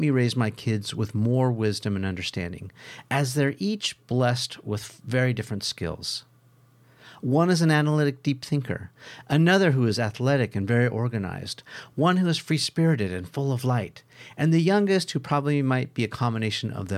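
No technical faults are audible anywhere in this recording.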